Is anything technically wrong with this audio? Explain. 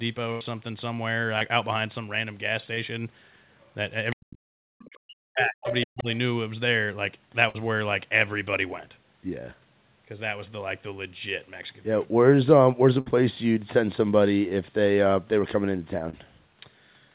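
Yes. The speech has packet loss and echo-canceller problems, heard through a narrowband G.711 path with nothing above 4 kHz.

Burst of packet loss at 0.32–0.43 s, 7.49–7.56 s and 13.00–13.08 s. Consecutive packets were lost or arrived too late, so the receiver extended and faded the last sound, giving a held buzz or hiss. About 80 ms is missing in the first gap and about 60 ms in each of the others.

Short concealed packet loss at 1.39–1.43 s, 2.75–2.79 s and 16.10–16.26 s. Each dropout of about 20 ms was patched by continuing the preceding sound and then blending back, which leaves a brief smear or wobble.

Other side's voice leaking through at 3.61–3.72 s, 4.79–4.86 s and 5.68–5.75 s. This is likely residual loudspeaker echo the canceller missed. The first two scraps are faint, at about 35 and 30 dB down, but the third is nearly as loud as the talker, at about 5 dB below.

Speech suppressed in double talk at 4.14–4.57 s and 4.87–6.09 s. 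The canceller, likely confused by simultaneous talk, turned the talker down by roughly 40 dB at its deepest, so the voice dips and breaks up.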